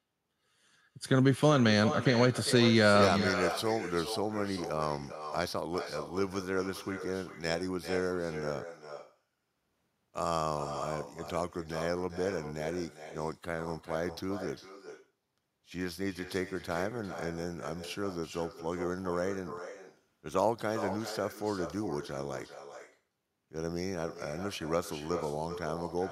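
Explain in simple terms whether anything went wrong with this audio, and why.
Something did go wrong: an echo with no canceller runs through the whole recording. Every sentence comes back a little under half a second later as a quieter, thinner copy. The far end's loudspeaker fed its microphone, and nothing removed that returning sound.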